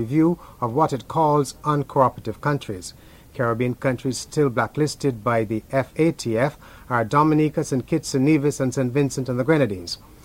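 No technical faults can be heard anywhere in this clip.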